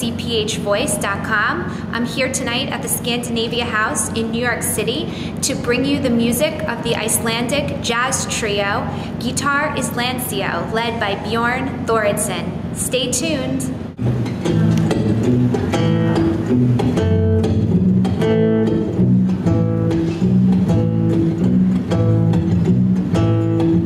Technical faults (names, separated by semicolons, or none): gain pumping